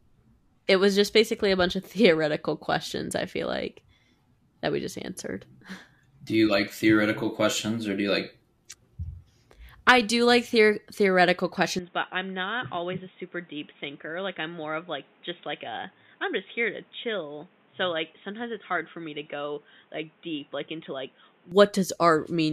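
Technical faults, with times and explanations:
11.79–21.52 s: input likely switched to a poorer device. Speech abruptly turns dull and quieter, roughly 10 dB down, with nothing above 3.8 kHz and new background noise.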